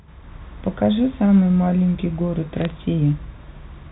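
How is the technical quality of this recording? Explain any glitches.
There's one glitch, a short burst of crackle on the phone line between 2.61 and 2.71 s. It sits on top of narrowband telephone audio that tops out around 4 kHz, as you'd expect from G.711 A-law coding. What you're hearing there is bit errors on a digital phone line: something like a few tenths of a percent of bits got flipped over that tenth of a second. Each flip corrupts a single sample, and when it lands on the sign or a high-order bit the sample jumps, giving a sharp tick. A cluster of those comes across as a quick crackle over speech that otherwise passes through unchanged.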